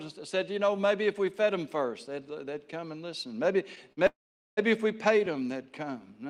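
Speech with two playback interruptions just before "if we". The first is a short stall from a late packet at 3.93 to 3.99 s. The last sound is held for about 45 ms while the jitter buffer sits empty, then resumes from the same point with nothing lost, pushing the timing back by 45 ms. The second is a call audio freeze from 4.07 to 4.59 s. A brief fading continuation gives way to roughly 440 ms of silence, and the speech then picks up where it stopped, inserting a 502 ms gap without dropping any audio. The likely cause is packets held up in transit long enough to drain the jitter buffer completely.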